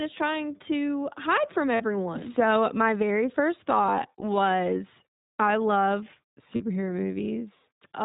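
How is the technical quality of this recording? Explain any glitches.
The recording is speech carried throughout by a narrowband voice codec whose damage is plainly audible, and it has three brief dropouts covered by packet-loss concealment.

iLBC codec, throughout: nothing above 4 kHz survives, and each 20 ms frame's excitation is coded on its own, leaving the speech clear but rough and synthetic. The texture fits iLBC at 15.2 kbps. That roughness, beyond a simple 4 kHz low-pass, marks it as a codec rather than plain band-limiting.

Lost iLBC frames at 1.76 to 1.82 s just after "trying to hide from", at 4.20 to 4.24 s after "my very first thought", and at 6.56 to 6.62 s after "I love": the decoder filled about 40, 20 and 40 ms by repeating the last pitch cycle mixed with noise. This fits two, one and two lost frames, and each gap sounds like a held, buzzy or breathy vowel. Unlike concealment in codecs that depend on earlier frames, the voice returns cleanly at once.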